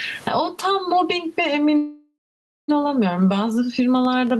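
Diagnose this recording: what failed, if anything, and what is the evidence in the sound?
Gain pumping runs through the whole recording, likely from input gain set far too high and a fast limiter or compressor in call processing pulling it back. The level swings by around 15 dB. The room noise sits about 44 dB below the speech. A noise gate would cut to silence instead.

A call audio freeze, likely a network stall that emptied the jitter buffer, runs from 1.77 to 2.70 s. The last sound is stretched into a fading fill, with about 0.53 s of that near silence. The speech then resumes exactly where it stopped. Unlike a packet-loss dropout, nothing is missing; the audio simply arrives about 0.91 s later.

A train of clicks starts at 4.05 s and lasts to the end. The clicks come about 5.9 times a second at an uneven pace, roughly as loud as the speech. They are likely interference in the analogue wiring or a faulty connection or power supply. 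Their repeated, near-identical shape sets them apart from a single edit pop or codec glitch.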